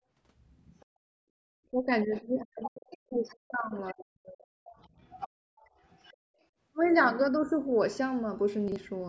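A speech clip with the other side's voice leaking through at 0.80–0.86, 2.16–2.22, 2.63–2.97, 3.28–3.37 and 4.71–6.16 s, likely the echo canceller's residual from the loudspeaker. The leak is a second voice layered under the talker rather than a change in the room. It is faint at first, strongest at 2.63–2.97 s (roughly 10 dB below the talker) and moderate through the long 4.71–6.16 s stretch. The background is gated by the echo canceller at 0.86–1.43 and 5.29–5.46 s, where the room sound falls by about 40 dB and then returns. Speech is suppressed in double talk between 1.71 and 4.58 s, likely because the canceller could not separate the talker from the overlapping echo. The talker's own voice dips deeply, around 40 dB, or cuts out in pieces for roughly two seconds in total. At 8.68–8.76 s, chunks out of order garble the sound: a 40 ms chunk plays one position late, giving hard joins without any missing audio.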